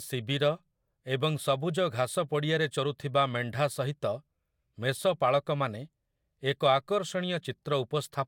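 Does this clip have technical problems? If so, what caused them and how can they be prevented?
No, nothing stood out as a technical problem on listening to this speech recording.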